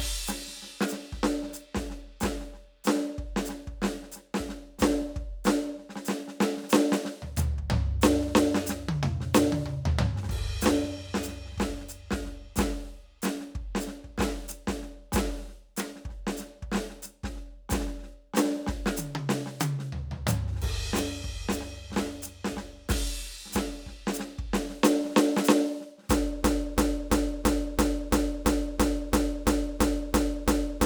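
At 26.44 s the music locks into a broken-record loop that runs to the very end. A 336 ms fragment repeats exactly, back to back, about 13 times, so the same short figure stutters on and the music that should follow is lost. The likely cause is a stalled player, encoder or stream resending its last held chunk. On a waveform and spectrogram, identical blocks tile the timeline at a steady 336 ms spacing.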